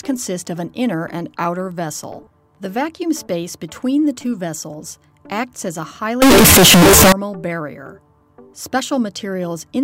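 From 6.22 to 7.12 s, harsh near-square blast at an almost fixed, high level, background as loud as foreground, unlike clipping; likely float read as integer.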